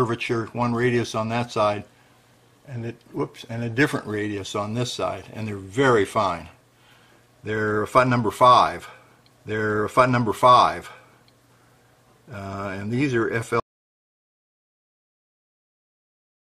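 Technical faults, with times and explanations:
13.60 s to the end: audio dropout to silence. The sound cuts off mid-flow and the final 2.8 s are silence with no room tone or noise floor, likely because the input was lost while the recorder kept writing zeros. Unlike a fade-out or gated pause, nothing decays first.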